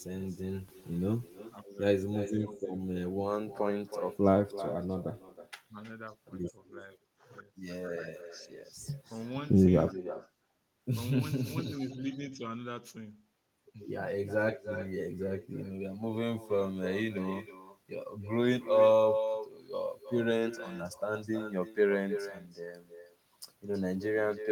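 Throughout the speech, echo with no canceller returns each phrase roughly a third of a second later, about 11 dB quieter and thinner; spectrograms show faint delayed duplicates trailing every syllable.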